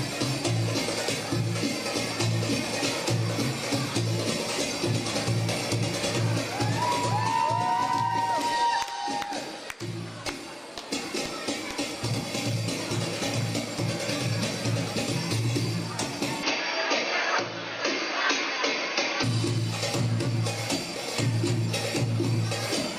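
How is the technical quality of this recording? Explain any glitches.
The recording has one clear glitch. From 16.43 to 19.23 s the input likely switched to a poorer device: the sound turns dull, with nothing above 6.5 kHz, and a faint new background noise appears. There is no gap at the switch and no level jump. The change in background noise is what separates this from a simple filtering or bandwidth drop.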